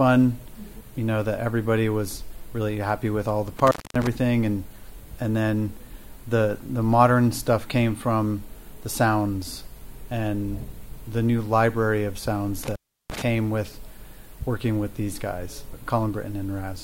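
At 3.59 s the sound drops out through 4.07 s with crackle at either edge, an intermittent contact with the line open for about 244 ms. It recurs from 12.63 to 13.22 s, open about 344 ms, consistent with a loose cable or plug momentarily breaking the connection.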